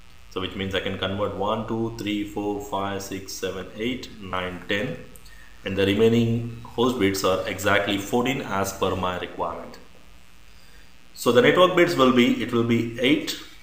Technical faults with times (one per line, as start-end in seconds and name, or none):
0.00-13.63 mains buzz
4.31-4.33 lost LE Audio frames